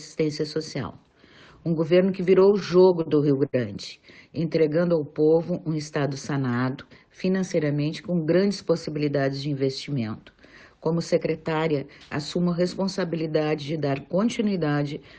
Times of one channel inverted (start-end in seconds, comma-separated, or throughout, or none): none